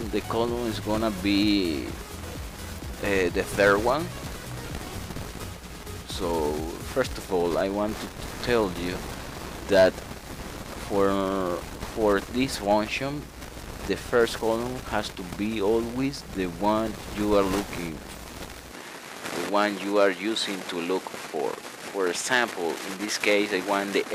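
The audio has a change in character at 18.72 s that runs to the end: the top end is cut off, with nothing above 13 kHz, and a faint new noise floor sits well under the signal. The level holds steady and there's no gap at the switch. This is most likely an input switched to a poorer device partway through the recording.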